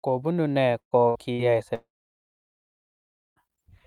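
Speech, with three bursts of packet loss. They occur at 0.79 to 0.94 s, 1.09 to 1.18 s and 1.33 to 1.42 s. Each time the last sound is stretched into a fading fill, then speech resumes with audio missing. About 120 ms is lost in the first, and about 60 ms in each of the others. Then a long gap runs from 1.75 to 3.39 s. The sound is held briefly and fades, and nearly 1.5 s of silence follows. About 1.6 s of speech never returns. A long network dropout is the likely cause.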